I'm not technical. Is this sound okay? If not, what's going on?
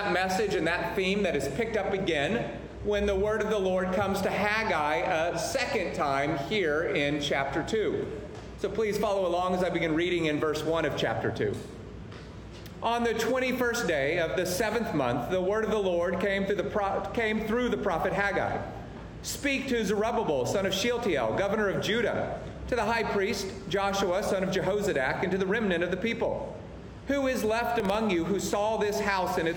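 No. Near the end, from 27.80 to 27.95 seconds, there is processor overload crackle: the computer fell behind and missed a handful of its tiny, under-a-millisecond audio deadlines in a row, replaying stale snippets each time. You hear a brief gritty crackle that then stops.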